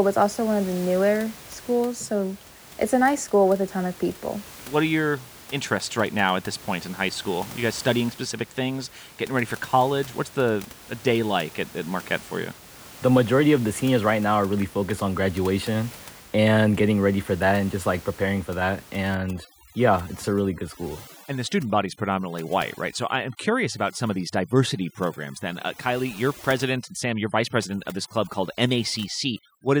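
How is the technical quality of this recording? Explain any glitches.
The recording has one processing fault, audible in its final stretch. Starting at 19.15 s, right after "like preparing for that", overdone noise removal takes hold and lasts to the end. The room noise, about 21 dB below the speech, drops and breaks up into twinkling specks. A noise reduction stage set far too aggressively is cutting individual frequency bands whenever they sit close to its noise estimate. Softer parts of the speech fall below that threshold and vanish too.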